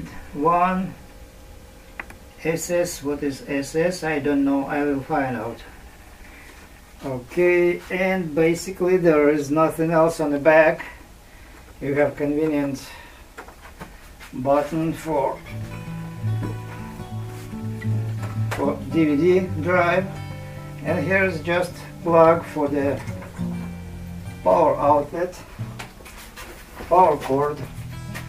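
No technical faults are audible.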